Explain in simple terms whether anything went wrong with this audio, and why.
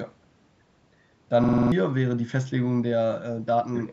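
From 1.44 to 1.72 s, the speech gets stuck in a system hang loop. The computer froze while the sound hardware kept replaying the same 46 ms piece six times, which fits a 2048-sample buffer. Unlike a dropout's silence, you hear a rapid stutter repeating at 21.5 times per second. About a third of a second of real speech is lost.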